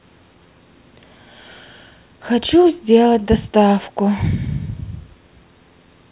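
No audible technical faults.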